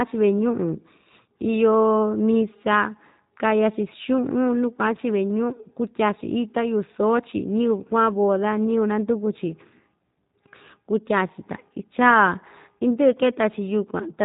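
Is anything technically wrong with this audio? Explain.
Yes. G.729 codec damage runs throughout: the speech is rebuilt from a vocal-tract filter and sparse pulses, fitting roughly 8 kbit/s, so it sounds rough, synthetic and cut off above 4 kHz.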